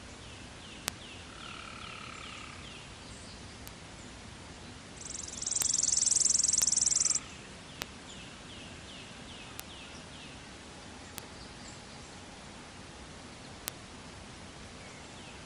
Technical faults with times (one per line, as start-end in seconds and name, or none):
0.88 bit error spike
3.67 bit error spike
5.62 bit error spike
6.62 bit error spike
7.82 bit error spike
9.60 bit error spike
11.18 bit error spike
13.68 bit error spike